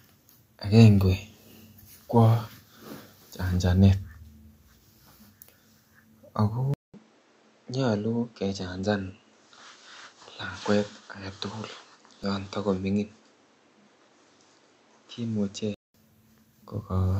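Speech, with two faults. At 6.74 s a 0.2 s gap comes before a duller, quieter sound with nothing above 8 kHz and new background noise, likely an input switched to a poorer device, lasting until 15.94 s. A repeated buffer causes brief clicks at 10.43 s and 12.24 s, each a replay of about 2.67 ms of audio, which fits a 128-sample buffer.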